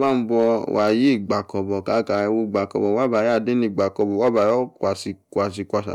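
Speech runs through hard clipping from start to finish: driven about 3 dB past full scale, fewer than one sample in a hundred is cut flat, giving brief crackle on peaks rather than the rounded warmth of soft saturation.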